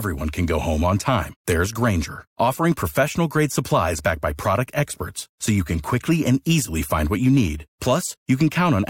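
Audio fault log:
No faults are heard in this speech clip. Nothing in the audio calls for an entry in this log.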